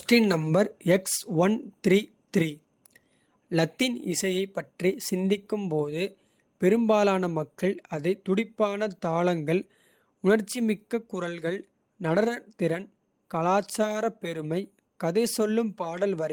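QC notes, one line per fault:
No technical faults can be heard in the signal, which carries its speech with no dropouts, distortion, noise bursts or timing disturbances anywhere in the recording.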